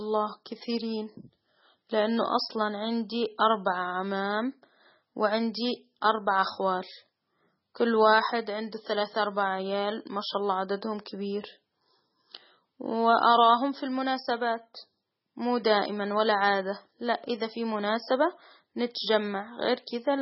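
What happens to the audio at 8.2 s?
At 8.2 s you're hearing the same thing as everywhere else in the clip: heavy damage, likely from MP3 compression at a very low bitrate, around 16 kbps. Nothing comes through above 5.6 kHz, and weak frequency lines flicker on and off between frames, giving the speech that watery, swirly texture with smeared edges.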